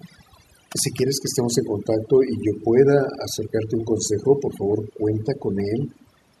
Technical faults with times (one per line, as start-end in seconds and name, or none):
0.00-6.40 overdone noise removal